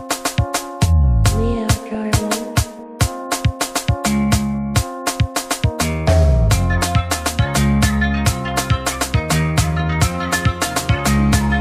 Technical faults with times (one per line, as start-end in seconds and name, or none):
1.94-2.24 DAB burbling
8.45-8.59 DAB burbling